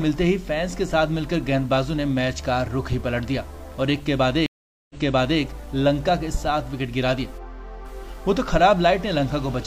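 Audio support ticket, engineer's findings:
Stream reconnect, 4.46–5.41 s: audio cuts to silence for 433 ms, then resumes about 0.51 s earlier, repeating material. Connection dropped, player reconnected and started a fresh decoder mid-stream; server resent a buffered burst. Waveform: flat gap. Spectrogram: blank column, then a duplicated pattern.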